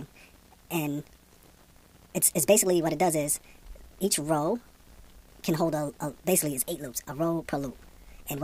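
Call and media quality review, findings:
Wrong sample rate, entire clip: sound runs 1.5 times fast and 7.02 semitones high, consistent with 32 kHz material played at 48 kHz without resampling. Likely playback config. Spectrogram: all energy shifted up 1.5x. Waveform: events compressed in time.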